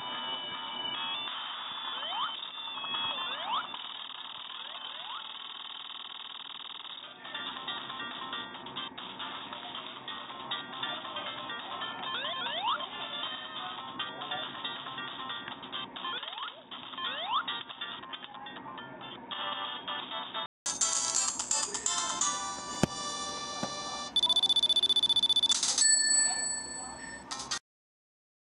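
From the start until about 20.66 s the sound is boxy, with nothing above 3.8 kHz, roughly 5 dB quieter, and carries its own noise floor some 50 dB down. That's likely the input switched to a poorer device; a 200 ms silence marks the changeover.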